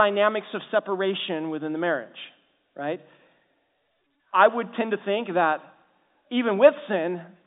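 Nothing stood out on listening to this speech, which comes through the ordinary G.711 telephone coding with its narrow line band of roughly 200 Hz to 3.7 kHz.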